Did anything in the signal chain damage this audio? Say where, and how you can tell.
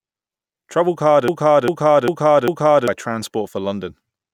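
Yes. From 1.28 s to 2.88 s the speech stops moving forward and a single fragment of about 0.4 s plays four times back to back, identical each time, before normal speech resumes. That exact, seamless repetition is a broken-record loop. The likely cause is a stall in the playback or streaming buffer, which kept re-sending the last block it held, so the speech that belonged in that stretch is missing.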